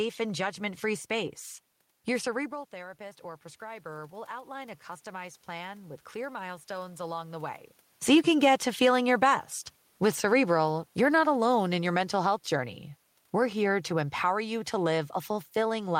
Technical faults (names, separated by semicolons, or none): automatic gain rising